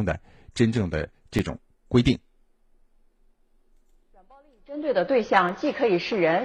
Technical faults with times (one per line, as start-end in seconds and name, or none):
1.38 underrun with held sample
5.49 underrun with held sample